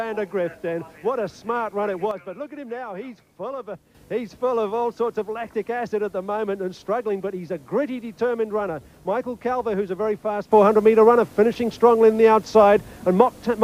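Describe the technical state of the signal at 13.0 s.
At 13.0 s the signal sits inside a sudden gain jump that begins at 10.52 s and holds to the end of the clip. From one sample to the next the level rises by about 9 dB, and the wanted sound and the background noise step up together. The likely cause is a digital gain change or bit shift applied without a ramp, so the transition is abrupt rather than faded in.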